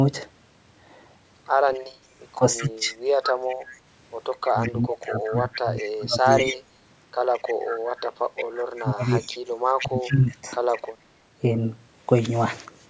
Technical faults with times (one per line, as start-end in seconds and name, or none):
1.67-10.92 echo leak
2.36-2.96 speech suppressed in double talk
4.52-6.29 speech suppressed in double talk
7.74-10.43 speech suppressed in double talk